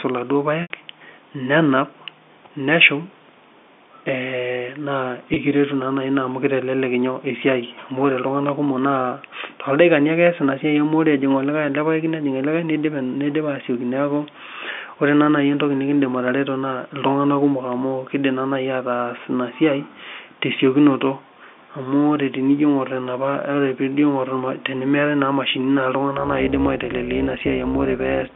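Packet loss with pitch repetition occurs at 0.62 to 0.70 s and again at 5.34 to 5.36 s. The receiver loops the last pitch period over each gap: the 80 ms loss, which suggests about four packets, sounds like a buzzy held tone fading out, while the 20 ms one is a brief, slightly sustained buzz.

Overlap-add ripple runs from 26.2 s to the end. The frames are rejoined with overlapping windows whose gains don't sum evenly, so the level dips by about 11 dB at a rate of around 200 Hz. The result is a metallic buzz with extra tones around each note over the narrow telephone-band sound of the G.711 line.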